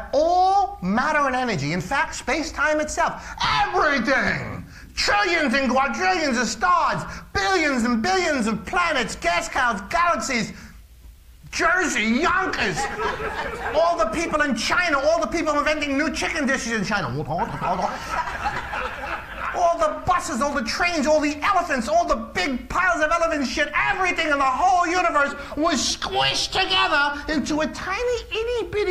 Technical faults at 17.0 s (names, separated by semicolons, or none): none